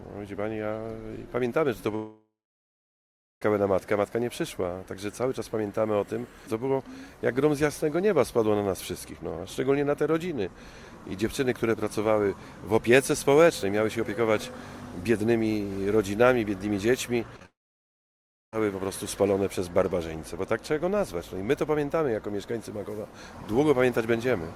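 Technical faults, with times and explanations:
1.95–3.42 s, long network dropout: About 1.5 s of audio never arrives. The receiver first extends the last sound as a decaying buzz or hiss, which collapses within a few tenths of a second. About 1.1 s of silence or low steady noise follows. Audio resumes at 3.42 s with nothing recovered from the gap. The likely cause is a network outage long enough that the receiver's concealment gave up and muted.
17.36–17.40 s, 17.40–17.42 s and 17.43–17.45 s, short concealed packet loss: Three closely spaced holes of about 20, 10 and 20 ms occur where audio missed the decoder's deadline. Each is filled by continuing the preceding sound, pitch-based if voiced and shaped noise if not, then crossfaded back into real audio. The result is a quick smear or wobble, and a brief transient in that span can disappear. The run leads directly into the next dropout.
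17.45–18.53 s, long network dropout: About 1.1 s of audio is lost. It opens with a short synthesized tail continuing the last sound, which fades out quickly, leaving about 1.0 s of silence or faint steady noise. Playback returns at 18.53 s without the missing section. Coming straight after the packet losses above, this likely reflects the connection degrading and then failing outright for about a second.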